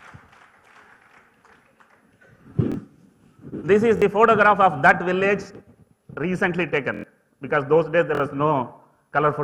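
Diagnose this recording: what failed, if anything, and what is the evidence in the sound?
The fault is at the driver or buffer stage: a repeated buffer. At 2.72–2.74 s, 3.97–4.02 s, 6.94–7.04 s and 8.15–8.20 s the same slice of sound replays with a hard join at each repeat. It plays twice, three times, five times and three times respectively, and each slice is about 23 ms, which fits a 1024-sample buffer. The output ran dry, so the device replayed its last block. Roughly 20 to 100 ms of sound goes missing each time. Identical, evenly spaced repeats with abrupt joins mark this as an underrun. A dropout would leave silence instead, and codec or network concealment would produce a smeared, fading fill.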